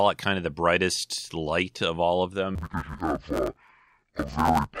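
A speech clip in which, from 2.55 s to the end, the sound turns dull and robotic. This is interleaved audio read as planar. Each short block of alternating left and right samples is split in half instead, with the first half taken as left and the second as right. Both halves play at half speed together, so the pace holds. The blocks are about 10 ms long, so there is no clear octave drop. Instead a buzz sits at the 100 Hz block rate.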